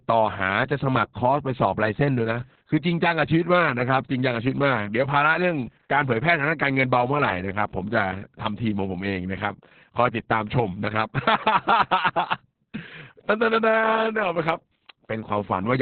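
From start to end, the speech carries heavy Opus voice compression. The coder is running in its SILK linear-prediction mode at narrowband, so nothing above 4 kHz survives. The sound is muffled and boxy. Consonants lose their edge. The excitation is coded very coarsely, which fits a bitrate near 6 kbps. That gives the voice a hoarse, slightly robotic grain. The coder uses 60 ms packets.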